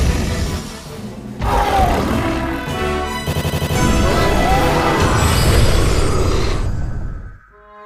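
A system hang loop runs from 3.33 to 3.76 s. The playback machine or its driver stalled while the audio hardware kept reading the same stretch of its ring buffer, replaying a single 85.33 ms slice five times over. That slice length fits a 4096-sample buffer. Repeating at 11.7 Hz, it comes across as a rapid machine-gun stutter. Roughly 0.4 s of the original audio never plays, so the sound jumps ahead once the loop releases.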